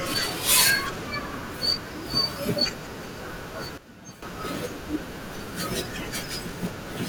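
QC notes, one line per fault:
3.78–4.22 s, sudden gain jump: speech and background noise both drop about 12 dB at once and snap back, likely a gain change applied with no ramp.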